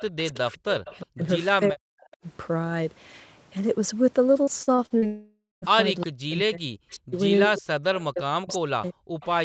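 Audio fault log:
0.00–1.06 s, 2.12–2.17 s, 6.00–6.06 s, 7.95–8.53 s, 9.21–9.26 s: echo leak. The far-end echo canceller likely let loudspeaker pickup through, so a copy of the talker returns 360 ms late, about 20 to 35 dB down.
0.01–2.07 s and 6.04–9.44 s: speech suppressed in double talk. With both sides talking, the echo canceller likely ducked the near talker too, so the sound dips by up to about 40 dB in pieces.
4.43–5.05 s: repeated packet loss (robotic sound). Five short holes, the longest 41 ms, are patched by stretching the previous sound, so about 31% of the span turns choppy.
5.06–5.65 s: long network dropout. About 560 ms likely never arrived. The concealment buzz fades into roughly 200 ms of silence, and the sound resumes with that part missing.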